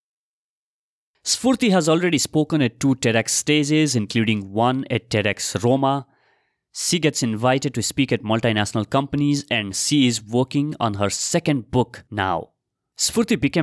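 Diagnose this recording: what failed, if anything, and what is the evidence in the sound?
Nothing failed: the speech carries no audible defect at any stage of the chain, so there is no fault to diagnose and no evidence to cite.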